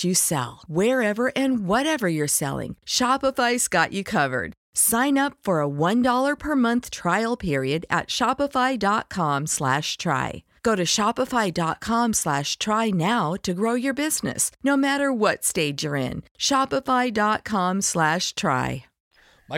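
Hard clipping at 7.93 s: for a brief instant the speech peaks push about 2 dB beyond what the signal path can carry, so the tops of the waveform are sliced off flat instead of following their natural curve. Those squared-off peaks generate a spray of high harmonics that were never in the original sound. With such a small overload and so short an event, it comes across as a single quick crackle on a loud moment.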